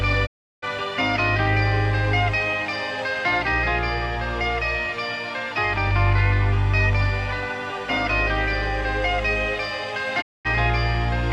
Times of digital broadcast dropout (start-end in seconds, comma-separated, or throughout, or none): 0.25-0.64, 10.20-10.47